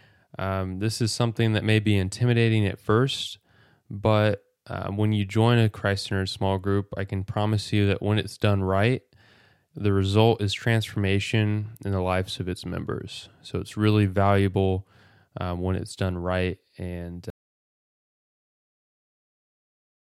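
The input feed was likely lost at 17.30 s, through a disconnected device or failed link, while the recorder kept writing silence. This audio dropout to silence cuts the speech off mid-flow and leaves dead, toneless silence, with no room sound, through to the end.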